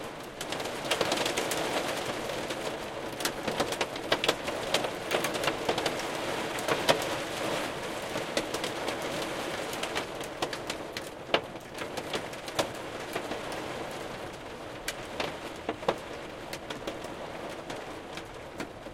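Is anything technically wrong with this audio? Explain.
Yes. At 17.38 s there is a block of digital silence. The audio drops out for about 2.7 ms, which fits a 128-sample buffer. Either the output buffer went unfilled in time or a calculation produced invalid values. The gap is too short to hear as silence, so it comes across as a tick or dip.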